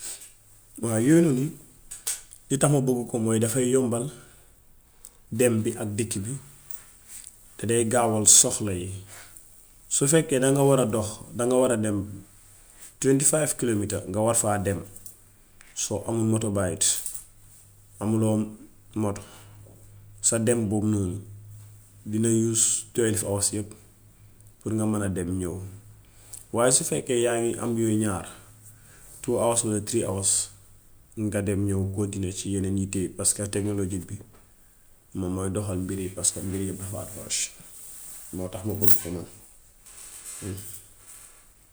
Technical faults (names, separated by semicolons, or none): none